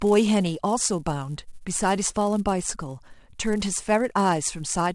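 A speech clip in which a filter is restarted on every block throughout, dropping its state and starting each block from silence; the resulting transient at every block boundary produces a steady 188 Hz buzz that tracks the speech level, which fits 128-sample blocks at around 24 kHz.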